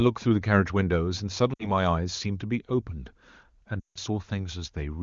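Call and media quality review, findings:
Lost AMR speech frames, 1.53–1.68 s: short dip to near silence, about 60 ms, which fits three 20 ms frames. Decoder concealment repeating last good pitch and vocal-tract parameters at falling gain. Radio-side frame errors failing checksum.

Lost AMR speech frames, 3.80–3.98 s: longer run, about 160 ms, roughly eight frames. Sound drops to near silence within two frames as gain decays, then returns weak or rough briefly. Wideband path at a high rate, clean outside these gaps.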